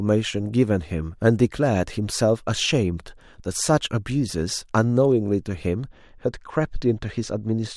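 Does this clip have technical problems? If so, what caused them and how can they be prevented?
Yes. Channel delay (comb filtering) begins at 5.86 s and runs to the end at 7.76 s. One channel lags by only about 0.04 ms, which fits an offset of roughly one sample. When both channels are summed to mono, the shared speech cancels at evenly spaced frequencies, with the first notch near 10 kHz, so the top end turns dull. Keeping both channels sample-aligned before any mono fold-down prevents it.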